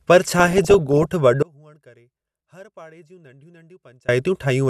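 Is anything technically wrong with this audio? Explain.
Yes, there are two faults. From 0.38 to 1.05 s the speech is overlaid with short blips of noise in individual frequency bands. This is DAB burbling: with weak reception, a bit error rate somewhere under one percent slips past error correction and corrupts MP2 samples and scale factors frame by frame.

From 1.43 to 4.09 s, about 2.66 s, the speech abruptly drops away, leaving only a faint residue about 30 dB below normal before it returns. This audio dropout to a faint residue is likely a loss of the wanted signal while the path downstream stayed live.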